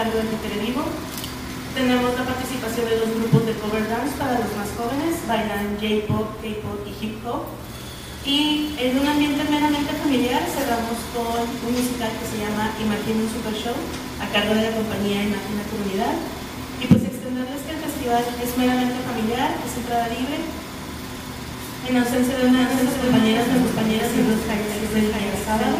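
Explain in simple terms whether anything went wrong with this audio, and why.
From 22.57 s to the end, a doubled audio track appears. A slightly quieter copy trails about 0.7 seconds behind, likely from a second, slower recording path.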